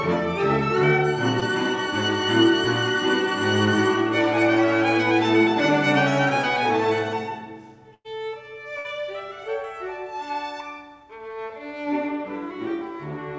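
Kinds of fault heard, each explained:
Short concealed packet loss: a packet's worth of audio failed to reach the decoder in time, so the receiver bridged the hole by extending the preceding sound and crossfading back into the real signal. Here it occurs once, at 1.40 s, where about 20 ms of audio is missing and replaced by a fill of roughly 16 ms. It is heard as a brief smear or wobble rather than a clean dropout.
Burst of packet loss: several consecutive packets were lost or arrived too late, leaving a longer gap that the receiver filled by continuing the last sound and turning it down as the gap lengthened, before resuming further on with the intervening audio gone. At 7.94 s, 100 ms is missing, concealed as a decaying extension that falls to near silence for about 40 ms. At 8.78 s, a further 60 ms is lost and bridged the same way.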